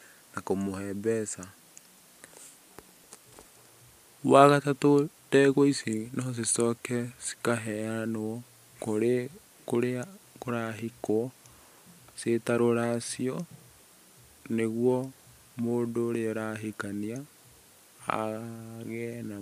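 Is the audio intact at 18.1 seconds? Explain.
Yes, at 18.1 seconds the audio is intact, with no dropout, click or other fault audible at that moment.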